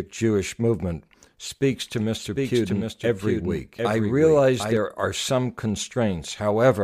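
From 1.71 to 4.77 s there's a doubled audio track: a second copy trails about 0.7 s behind, roughly 5 dB quieter, likely from a duplicated capture path.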